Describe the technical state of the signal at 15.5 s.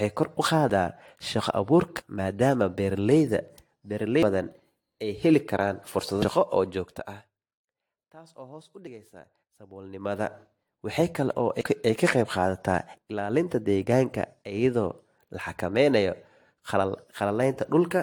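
At 15.5 s the speech sounds swirly, smeared and hollow, and consonant attacks blur. This runs through the whole clip. The likely cause is generation loss: roughly seven passes through AAC-LC at 96 kbit/s, each requantising on a new frame grid. Nothing sounds above 19.3 kHz.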